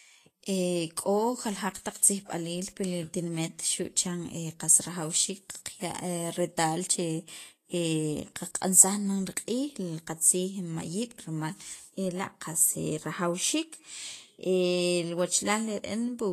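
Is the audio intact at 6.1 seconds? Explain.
No. At 6.1 s, as throughout the clip, the speech sounds hissy and grainy, with roughened tones, smeared consonant attacks, and nothing above 14.2 kHz. This is likely Vorbis compression at a low bitrate, near 35 kbps, with treble detail quantised into noise.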